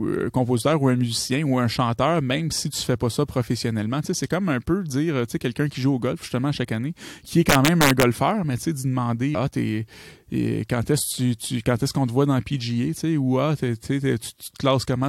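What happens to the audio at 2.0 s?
At 2.0 s the speech carries on intact, with no dropout, click, distortion or other audible fault.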